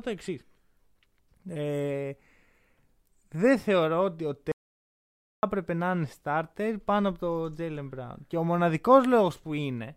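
The clip is speech with an audio dropout to silence from 4.52 to 5.43 s, cutting in just after "δεν θεωρώ ότι ο" and returning on "έπρεπε να είναι starter". For about 0.91 s the signal falls to silence, with no room tone or noise floor, and the sound breaks off and resumes mid-flow. That separates it from a natural pause or a noise gate, which would leave faint background or fade smoothly. The likely cause is a brief loss of the input feed while recording continued.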